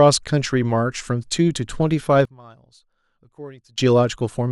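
Speech that collapses from 2.25 to 3.78 s: the centred voice and low end fall by about 25 dB, leaving a faint residue, likely one channel inverted cancelling on mono summing. Unlike a gain dip or dropout, what remains is only the small mismatch between the channels rather than the same sound turned down.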